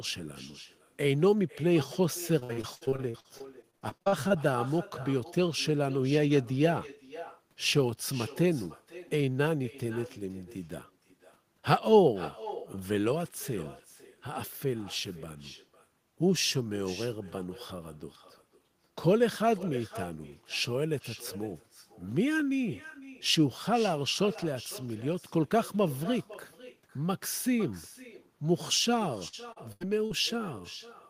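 Speech throughout carries an echo with no canceller: a thinner copy about 17 dB below the talker returns roughly half a second later, the far end's loudspeaker feeding its microphone unremoved. Repeated packet loss gives robotic, choppy sound from 2.39 to 4.32 s, where short gaps up to 60 ms are patched over about 29% of the span, and again from 29.28 to 30.12 s, with gaps up to 84 ms.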